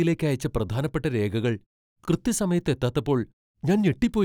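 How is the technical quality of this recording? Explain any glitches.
No technical faults are audible in this speech recording; the background falling silent in the pauses is normal gating, and every word comes back in time.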